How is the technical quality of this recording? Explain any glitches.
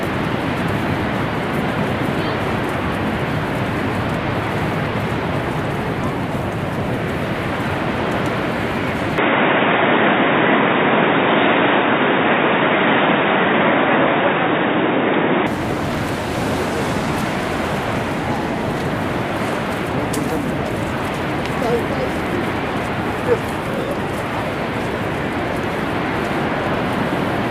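The recording has one clear glitch. Input switched to a poorer device, from 9.18 to 15.47 s: the sound abruptly turns dull and boxy, with nothing above 3.8 kHz, a shift in level of about 5 dB and faint new background noise, then clears up again at 15.47 s. No gap marks either change. The likely cause is the system moving its input mid-recording to a narrower-band microphone or headset call profile, which has its own tone, gain and noise floor.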